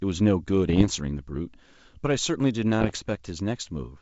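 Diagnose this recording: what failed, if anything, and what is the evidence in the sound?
Bit errors on an ADPCM link corrupted the transmission stage. The speech carries pops and rough bursts from 0.68 to 0.87 s and again from 2.80 to 2.99 s. The second burst is harsher. It fits an error rate near one percent, against a fraction of a percent for the first. Each flipped bit throws the decoder's step size and predictor off track. The damage therefore rings on briefly, with short jumps in level. The G.722 coding itself sounds clean outside these bursts.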